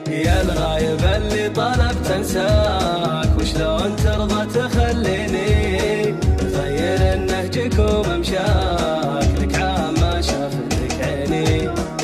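Nothing here sounds off to me; the audio runs along steadily, with no dropouts, glitches or other technical problems to point to at any moment.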